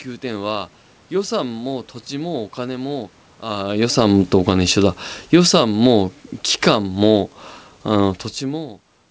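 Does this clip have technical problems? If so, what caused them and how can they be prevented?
Yes. Automatic gain falling: the automatic gain control judged the input too loud and wound its gain down, from 3.64 to 5.73 s by about 11 dB and again from 6.44 to 6.89 s by about 4 dB. The voice and the room noise behind it sink together during those spans, so the background dips along with the talker. The talker's own level shift around 3.5 s is natural and separate. Prevent this by setting a fixed input gain and disabling the AGC.

Automatic gain rising: between 5.65 and 6.23 s the automatic gain control decided the input had become too quiet and pushed its gain back up by about 5 dB. This overlaps the end of the first drop, so the level pumps, swelling and then falling again within about a second, and the room noise swells with the voice. The call codec's band limit at 8 kHz, consistent with G.722, is heard throughout. 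Keep the AGC off, or slow its attack and release so it stops chasing short level changes.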